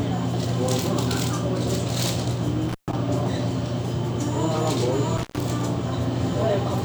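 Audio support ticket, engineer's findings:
Dropout with crackle at both edges, 2.69 to 2.93 s; signal gone for about 133 ms, faint hiss in the gap. Intermittent contact at a loose plug or cable; the connection opens briefly and scrapes on break and remake.

Same symptom, 5.17 to 5.41 s; open about 111 ms, crackle at the edges, hiss only during the gap. Intermittent contact again, consistent with the same loose connector. Reseat or replace the cable and plug.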